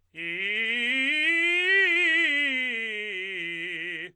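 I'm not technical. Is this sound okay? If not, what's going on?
Yes, this music sounds okay, with nothing going wrong in it.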